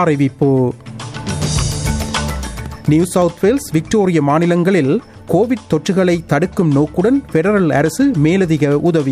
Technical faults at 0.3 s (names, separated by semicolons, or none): none